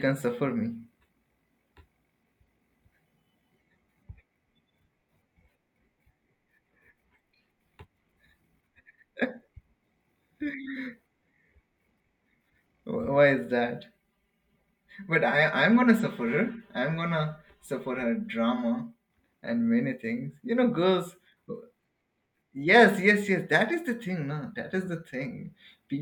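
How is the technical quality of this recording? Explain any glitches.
The speech has one clear glitch: channel delay with comb filtering, from 13.83 to 19.10 s. One channel lags by about 5 ms before both are mixed to mono. Shared content then cancels at evenly spaced frequencies starting near 100 Hz, making the speech hollow and phasey. Unlike a flanger, these notches stay fixed instead of sweeping.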